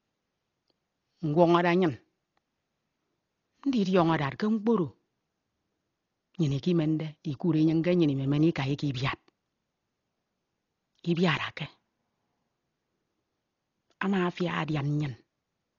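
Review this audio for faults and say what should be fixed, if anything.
Throughout, the speech sounds dull and rough, likely heavy Dolby Digital compression at a rate fitting 32 kbps. The band stops at 7 kHz, starved lines are dither-filled, and spectrograms show speckled noise. To prevent it, encode at a higher bitrate or keep an uncompressed or lossless master.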